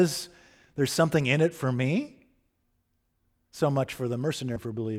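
At 4.56 s, damaged data in the compressed stream: the decoder loses sync, giving a brief glitch, a thin vertical disturbance on the spectrogram.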